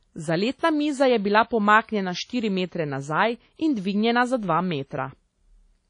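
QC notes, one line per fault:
Throughout: WMA compression. The speech sounds ringing and washy, and plainly damaged. A hiss rises and falls with each syllable. Nothing is heard above 10.1 kHz, so the top end is dull and closed in. The likely cause is a transform codec like WMA at a low bitrate, which fits about 32 kbps. Long blocks smear the quantisation noise over tens of milliseconds around each sound. Weak spectral detail is dropped entirely.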